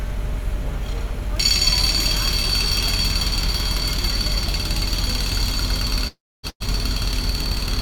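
At 6.07 s the audio gives way to a held, decaying hiss that thins to near silence by about 6.46 s, most likely a long network dropout: roughly 0.36 s never arrived, and the receiver's concealment stretched the last sound before giving up. Playback resumes later in time, the missing stretch simply gone.

Just after, at 6.49 s, a burst of packet loss removes about 120 ms. The last sound is carried forward and faded for roughly 110 ms, leaving about 70 ms of near silence, and the audio picks up at 6.63 s with that portion skipped.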